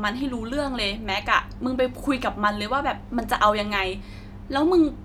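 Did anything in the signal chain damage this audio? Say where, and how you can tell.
No, nothing along the chain from capture to playback seems to have left a mark on this recording; it comes across as ordinary, undamaged speech.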